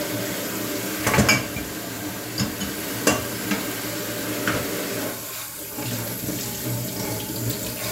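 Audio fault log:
No technical faults can be heard anywhere in this recording of sounds, and the signal stays free of faults throughout.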